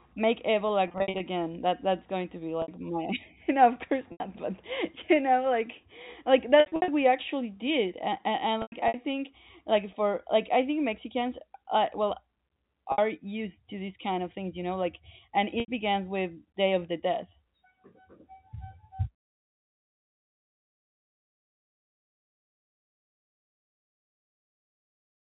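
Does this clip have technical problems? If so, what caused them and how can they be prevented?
Yes. The problem is packet loss with pitch repetition at 0.88–1.20 s, 2.62–2.68 s, 4.12–4.20 s, 6.60–6.88 s, 8.62–8.94 s, 12.92–12.98 s and 15.60–15.68 s. The receiver bridges each gap by looping the last pitch period, giving a held, buzzy tone. The longer events, with 180 to 200 ms lost in scattered runs of up to 100 ms, fade toward silence before the speech resumes. The gap lengths fit 20 ms packets over the G.711 link. Prevention: reduce network loss through QoS priority or a wired path, and add forward error correction or redundancy.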